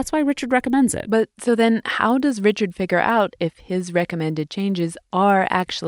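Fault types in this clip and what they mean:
Resampler restarted on every block: each 100 ms chunk got converted on its own, so the edges lost their real neighbours and picked up a small error. You hear it as a steady tick at 10 Hz riding on the speech, consistent with a 24 kHz to 48 kHz conversion.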